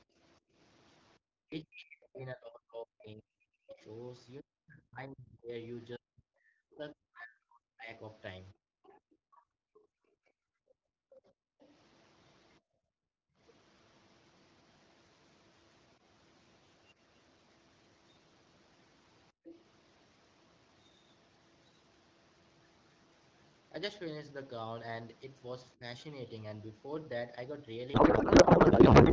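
A speech recording in which, from 0.07 to 19.54 s, the talker's voice repeatedly dips, thins and cuts out in pieces, about ten seconds in all and falling by as much as about 40 dB, with one more brief dip of about 15 dB from 25.75 to 25.82 s. These are likely speech suppressed in double talk, where the echo canceller turns down the talker along with the echo it cannot separate. A second voice, about 10 dB below the talker, runs from 3.69 to 11.72 s and returns briefly from 19.45 to 19.54 s. This is the other side's voice leaking through, likely loudspeaker echo that the canceller failed to remove from the microphone. From 27.93 s to the end at 29.12 s the speech turns into garbled noise and warble. That points to a codec payload misread, with octet-aligned AMR frames decoded as bandwidth-efficient ones, so the fields land in the wrong places.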